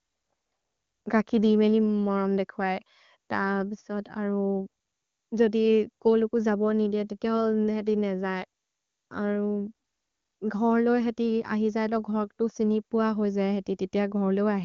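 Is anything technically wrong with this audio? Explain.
No, nothing technically wrong can be heard in this speech. It has passed through the AMR wideband (HD Voice) codec at 23.85 kbit/s, so the band stops at about 7.1 kHz, as that codec is designed to do.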